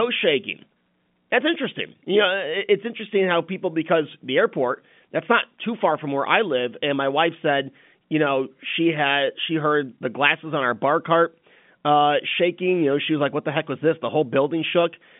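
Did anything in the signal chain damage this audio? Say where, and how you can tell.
No damage from the chain.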